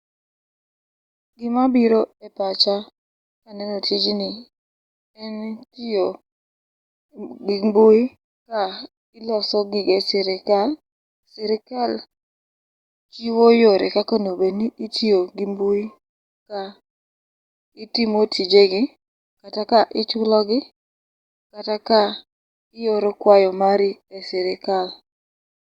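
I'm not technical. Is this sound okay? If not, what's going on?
Yes, nothing wrong can be heard anywhere in this speech recording, so there is no problem to fix.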